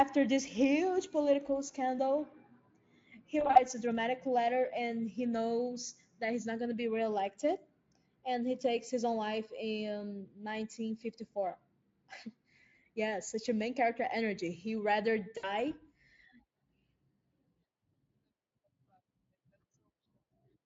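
Packet loss concealed by the speech codec appears twice in this speech clip. From 3.39 to 3.63 s, about 100 ms of audio is lost in short gaps spread over 160 ms. The longest run is 40 ms. At 15.37 to 15.53 s, about 60 ms is lost. Each time, the decoder keeps repeating its last pitch and filter at falling gain. The speech smears into a fading buzz or coloured noise. It stays thin briefly after packets return, above light Speex coding colour.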